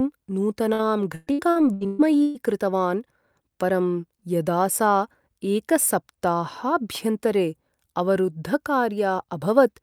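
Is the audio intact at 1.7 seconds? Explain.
No. At 1.7 seconds the speech sits inside a stretch of repeated packet loss running from 0.73 to 2.38 s. Seven gaps, the longest 120 ms, are each patched by stretching the preceding sound, so about a third of that span is filler. It sounds choppy, with pieces missing. A spectrogram shows smeared, frozen harmonic bands repeating where detail should change, and the waveform shows unnaturally regular, repeated cycles.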